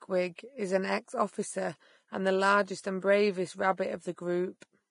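Throughout the speech, the treble is hissy and grainy, with roughened tones, blurred attacks and nothing above 10.5 kHz. This is likely heavy Vorbis compression at a low bitrate, which fits about 30 kbps. The coarsely quantised upper spectrum turns fine detail into noise.

From 0.35 to 0.38 s, a brief hiss runs ahead of a sharp attack, which sounds softened and smeared. This is pre-echo. The codec spread quantisation noise sized for the loud onset across its whole block, filling the quiet 30 ms before it.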